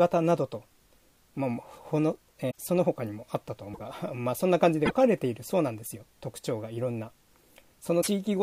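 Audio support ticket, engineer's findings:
Short chirp, noise burst or brief hole with a skip ahead, about 70–84 ms each, at 2.50–2.58 s, 3.72–3.80 s, 4.85–4.93 s and 8.01–8.08 s. Likely a broken MP3 bit reservoir: dropped frames leave the following frames (roughly three of 26 ms each) decoding borrowed bytes from the wrong frame.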